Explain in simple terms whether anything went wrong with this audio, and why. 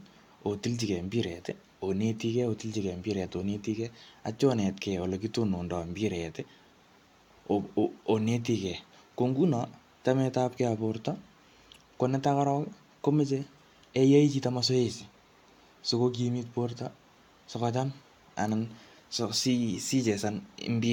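Listening through the recording, nothing stood out as having gone wrong with the sound.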